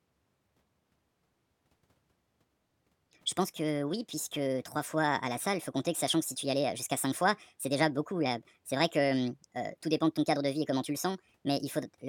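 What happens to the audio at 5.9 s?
At 5.9 s, as throughout the clip, a wrong sample rate is at work: the speech is played faster than it was captured, with no conversion, which fits 32 kHz audio played at 48 kHz. Everything runs 1.5 times too fast and about 7 semitones high, sounding hurried and chipmunk-like.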